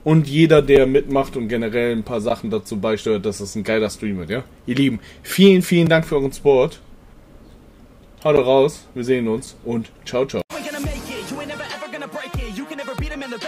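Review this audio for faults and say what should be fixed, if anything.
Blocks of digital silence occur at 0.76, 2.29, 5.86, 8.36 and 9.46 s. Each lasts 4 to 12 ms and sounds like a tick. The audio cuts out and back with no fade. The 5.8 and 11.6 ms gaps fit unfilled 256- and 512-sample buffers. Give the audio thread more buffer headroom or higher priority so every block is written in time.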